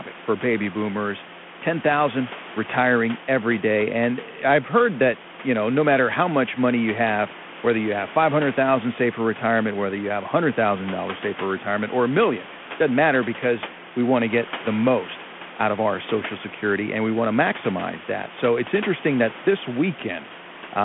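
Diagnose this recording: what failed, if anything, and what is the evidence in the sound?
Nothing failed: the speech sits about 16 dB above the room's own background noise, confined to the 200 Hz to 3.4 kHz telephone band expected of 32 kbit/s G.726 coding.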